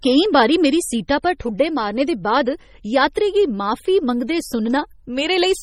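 From start to finish the speech carries heavy damage that points to MP3 compression, likely at a low bitrate around 32 kbps. Nothing sounds above 16 kHz. The encoder ran short of bits. It spent them only where its hearing model expected them to count. Weak frequency lines were dropped and returned from frame to frame. The result sounds watery and swirly. S sounds turn metallic and chirpy. Consonant onsets smear.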